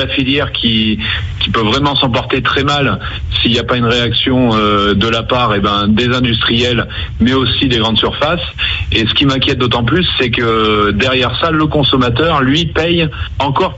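The level pumps from start to finish: the gain ducks by roughly 10 dB under each loud moment, flattening loud and soft parts together. It's classic gain pumping, likely from input gain set far too high with a fast limiter clamping down. The top end stops around 8 kHz, which fits a call path running Opus at about 64 kbps.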